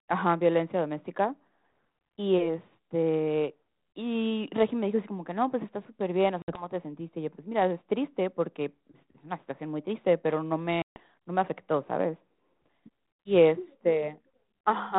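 At 6.42 s the speech drops into a hard-edged silent hole of about 60 ms, a few packets' worth: packet loss on an ADPCM call. When sound returns, the decoder's adaptive predictor and step size no longer match the sender's, so the speech comes back slightly distorted and takes about 0.2 s to settle by 6.68 s. At 10.82 s a longer gap of about 140 ms, several packets, does the same, recovering by 10.99 s, all over the faint coding grain of 32 kbit/s G.726.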